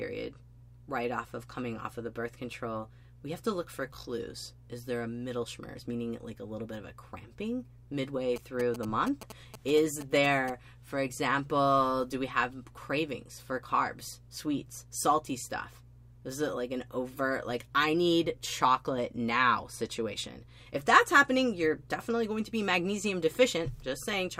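From 8.36 to 10.50 s, a nearby 2G phone's signalling transmissions are rectified by the audio circuit, producing GSM signalling bursts: a galloping dit-dit-dit of short 217 Hz buzzes, roughly 10 dB below the sound.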